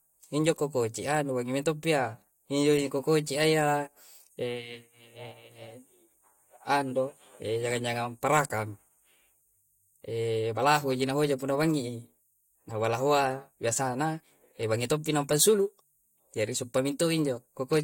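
Nothing goes wrong anywhere in this speech recording, so there's no fault to point to at any moment.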